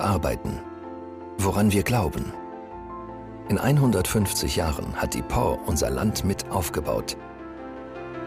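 Listening closely, nothing in the audio stood out as a technical problem.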